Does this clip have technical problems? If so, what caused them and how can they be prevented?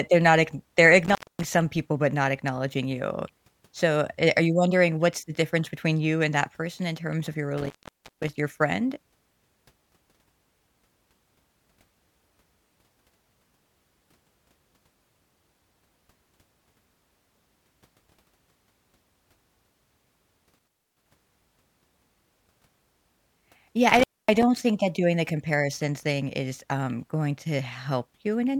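Yes. An intermittent contact, a loose cable or plug briefly opening the signal path, interrupts this speech four times. The sound drops out with crackle at the edges at 1.05 to 1.46 s after "they're not ackn they're" (open about 0.24 s), at 7.58 to 8.28 s after "in terms of your" (about 0.48 s), at 20.59 to 21.06 s (about 0.29 s), and at 23.89 to 24.43 s before "think that doing the" (about 0.25 s). Reseating or replacing the suspect cable and connectors, and securing them against movement, prevents it.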